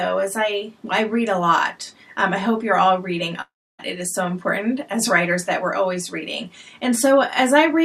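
From 3.41 s to 3.81 s the audio breaks up in a way that fits a long network dropout as the likely cause. The last sound is drawn out into a fading buzz or hiss, then about 0.29 s of near-silence follows, and when playback resumes roughly 0.38 s of material has been skipped. A short packet-loss glitch would be masked by a brief smear. This fill decays into a dead gap and the audio jumps ahead.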